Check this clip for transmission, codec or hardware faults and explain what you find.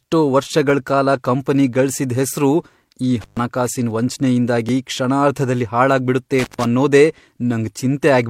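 Two kinds of fault occur in this speech clip: intermittent contact twice, and one overlap between stream segments.

Intermittent contact at 3.21 to 3.39 s and 6.39 to 6.64 s: a loose connection opens for about 128 and 140 ms, cutting the sound with crackle at each edge. The crackle distinguishes it from a clean digital dropout.

Overlap between stream segments at 4.69 to 4.73 s: the player trims sound it wrongly treats as duplicated, leaving a tiny skip. This fits 4-second segments, and unlike the contact fault it has no crackle or hiss.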